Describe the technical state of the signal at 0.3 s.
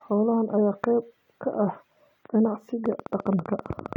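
At 0.3 s the speech signal is intact, with no audible technical fault at that moment.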